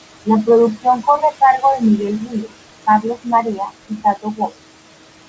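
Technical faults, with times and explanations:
Throughout, noise suppressor artifacts: the suppressor pulls the steady room noise down by about 20 dB wherever it judges a band to be noise, re-deciding every frame. That background, sitting about 12 dB below the speech, therefore dips in the pauses and swells back under the talking. The voice comes through with nothing above 8 kHz through the G.722 path.
0.75–0.86 s, 1.04–1.35 s (ending just before "cargo de"), 2.20–2.53 s, 2.86–3.27 s, 3.43–3.72 s and 3.89–4.58 s, speech cut by the noise suppressor: here the suppressor mistook quieter parts of the speech for background and lowered them with it, by about 12 to 22 dB at the deepest, the heaviest in the last stretch. Brief portions within each span, from a tenth of a second to a few tenths, sound swallowed or faint.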